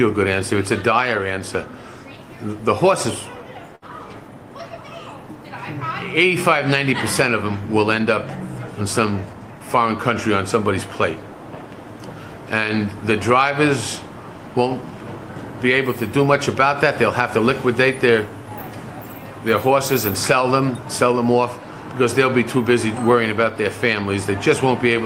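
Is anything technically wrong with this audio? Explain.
Yes, there are two timing faults, both from the receiver's jitter buffer.

From 3.75 to 3.84 s there is a short stall from a late packet. A packet missed its playout time, the buffer ran dry, and the receiver held the last sound for about 66 ms until the packet arrived, then carried on from the same point. Nothing is lost, but playback now runs 66 ms later. A sound is drawn out with a faint buzz or dip. On a spectrogram the harmonics run flat and unchanging for that span, and the waveform shows a repeating cycle.

From 9.10 to 9.55 s there is a jitter buffer speed-up. The buffer had built up more audio than its target, so the receiver cut out small pitch-period-sized slices over and over, removing roughly 70 ms in total. Playback runs at about 114% speed with the pitch unchanged, so this stretch sounds rushed. On a spectrogram the events are squeezed closer together while the harmonic spacing stays the same. 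The waveform shows shortened periodic sections with no gaps.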